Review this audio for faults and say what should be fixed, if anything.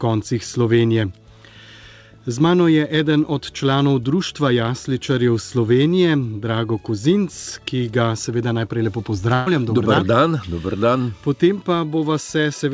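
Burst of packet loss from 9.34 to 9.48 s: a run of packets failed to arrive in time, so the receiver filled about 123 ms by stretching the last sound it had and fading it down, heard as a held, decaying tail rather than fresh audio. When playback resumes, roughly 120 ms of the original has been skipped. The absence of content above 8 kHz fits the G.722 call codec at what sounds like 64 kbps. To prevent this, enable forward error correction or redundancy and give the jitter buffer more headroom on unstable links.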